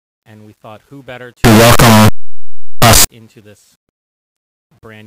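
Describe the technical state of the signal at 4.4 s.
At 4.4 s the speech signal is intact, with no fault present.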